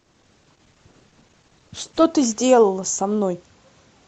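For the first 2.0 seconds the speech sounds dull and smeared, its treble missing and codec artefacts stronger, then clarity returns abruptly with no gap. That is an adaptive stream starting at a low bitrate, roughly 16 kbit/s Opus, before stepping up to about 64 kbit/s once the connection was measured.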